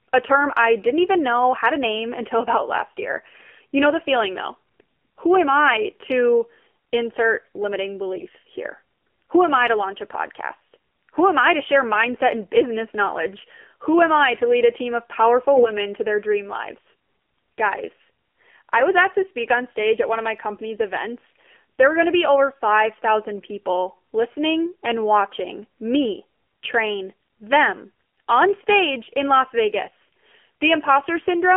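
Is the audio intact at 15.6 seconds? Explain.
No. From 15.55 to 15.73 s there are AMR bit errors. Flipped low-priority bits, roughly several percent, misplace the excitation pulses across about seven frames, making the voice hoarse, scratchy and gargly. Throughout, including this moment, the AMR narrowband mobile codec confines sound to roughly 250 Hz to 3.4 kHz. Its buzzy, synthetic quality fits a 7.4 kbps mode.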